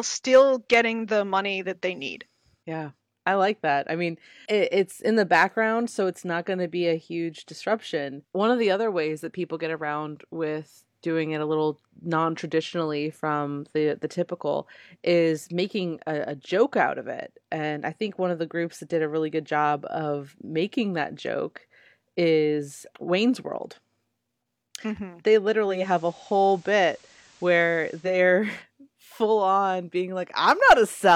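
At 25.66 s the speech goes through a digital radio blending to analogue: the receiver lost its digital stream and cross-faded over about 0.24 s to the station's FM signal, staying there until 28.20 s. You can hear it as a faint hiss roughly 30 dB under the speech and a level shift of about 1 dB. Then it fades back to the cleaner digital sound.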